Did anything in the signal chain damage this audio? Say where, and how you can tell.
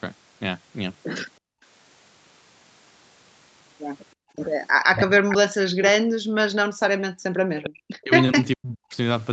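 Yes. The damage happens in the call's echo-cancellation stage. The speech band tops out near 8 kHz, which is expected on this path and is not a fault.

Background gated by the echo canceller: the room sound drops out at 1.39–1.64 s and again at 4.15–4.36 s, falling by about 34 dB each time before recovering. The pattern is a hard gate. While far-end audio was playing, the canceller pulled the microphone path down sharply, taking the ambience with it. It released the gate once that playback stopped.

Speech suppressed in double talk: the talker's speech dips by roughly 40 dB across 4.81–6.67 s, 7.28–8.12 s and 8.33–8.94 s. That adds up to somewhere over two and a half seconds of attenuated speech. This is likely double-talk suppression. With both ends active, the canceller could not tell local speech from loudspeaker echo, so it attenuated everything instead of only the echo.

Echo leak: brief delayed fragments appear at 4.96–5.01 s and 5.29–5.37 s, sitting roughly 10 dB under the direct speech. 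They trail the original by 416 ms. Those two short scraps are likely residual echo. The far side's loudspeaker output reached its microphone, and its canceller failed to remove all of it, so a late copy came back through the call.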